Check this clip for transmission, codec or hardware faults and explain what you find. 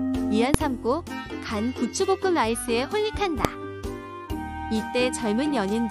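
Two short bursts of invalid numbers at full scale occur, at 0.54 s and 3.45 s. A calculation produced infinite or invalid values that were pinned to one extreme value for about 1.45 ms, then 0.73 ms, consistent with 64- and 32-sample blocks. Each is heard as a single sharp bang.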